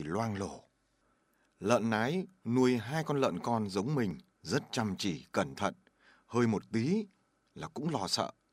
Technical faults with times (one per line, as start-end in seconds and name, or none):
1.60 overlapping chunks
4.11 overlapping chunks
6.62 overlapping chunks